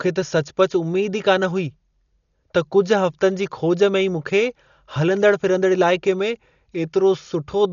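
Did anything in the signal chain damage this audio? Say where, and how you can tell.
Yes, at the codec stage. The speech is dull throughout, with nothing above 6.9 kHz and a rough, fluttering noise around voiced sounds. That likely comes from heavy Dolby Digital compression, which fits a bitrate around 40 kbps. The encoder narrowed the band and starved many frequency lines of bits, leaving dither noise in their place.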